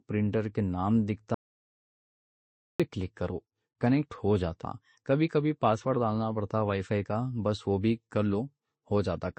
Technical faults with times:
0.00-9.38 transcoding between lossy codecs
1.34-2.80 audio dropout to silence

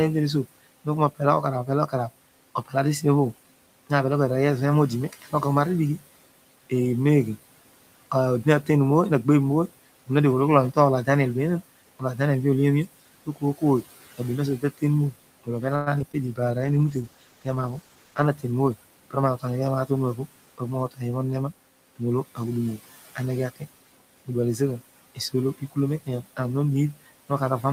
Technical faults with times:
0.00-27.73 noise suppressor artifacts
0.44-2.74 speech cut by the noise suppressor
5.09-5.33 speech cut by the noise suppressor
8.44-11.08 speech cut by the noise suppressor
13.26-20.99 speech cut by the noise suppressor
15.75-16.15 repeated packet loss (robotic sound)
16.61-18.33 call bitrate drop
17.82-18.69 jitter buffer speed-up
21.96-26.38 speech cut by the noise suppressor

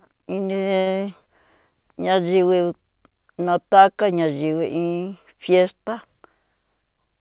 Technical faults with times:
0.80-0.88 short stall from a late packet
6.45-7.20 jitter buffer speed-up

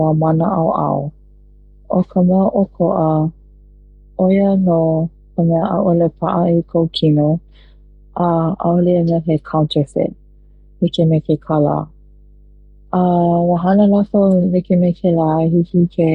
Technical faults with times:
0.00-16.15 mains hum

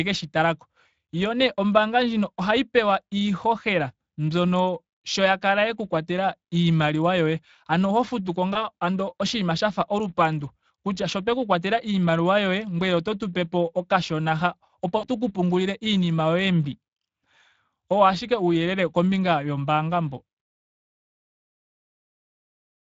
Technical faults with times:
0.00-22.86 Speex codec
8.53-8.58 VoIP packet loss concealed by the speech codec
14.97-15.07 VoIP packet loss concealed by the speech codec

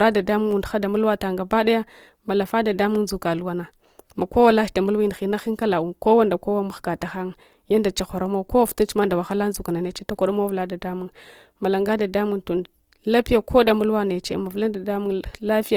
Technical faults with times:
0.00-15.77 Opus compression

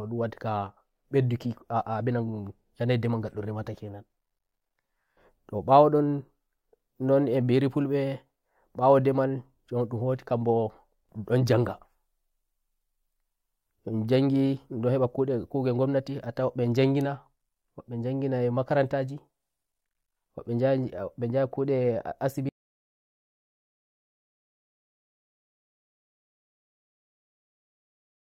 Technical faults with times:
22.49-28.24 audio dropout to silence

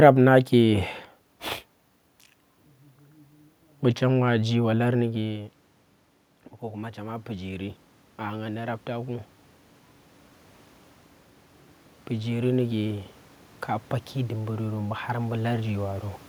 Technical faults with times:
6.62-9.37 automatic gain rising
14.13-16.13 automatic gain rising

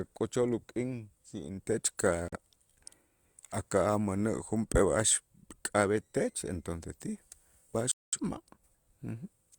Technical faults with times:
2.28-2.37 digital broadcast dropout
7.91-8.19 digital broadcast dropout

